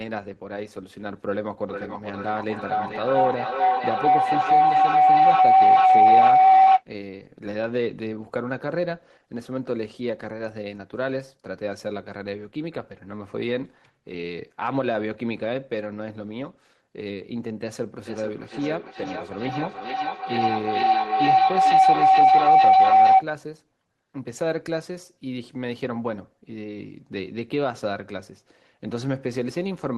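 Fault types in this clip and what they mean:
Feedback howl: a microphone-to-loudspeaker loop gaining level each pass, swelling into a tone near 700 Hz, pulsing roughly every 0.4 s; unlike echo, it grows rather than fades.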